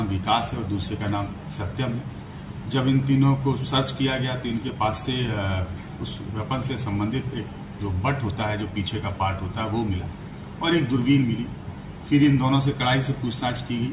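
No technical faults can be heard anywhere in this recording. Nothing in the audio stands out as a break, a disturbance or a change in level.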